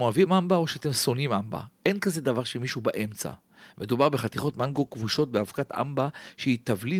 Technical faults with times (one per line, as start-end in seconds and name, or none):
4.01-4.06 microphone overload
4.42-6.73 call bitrate drop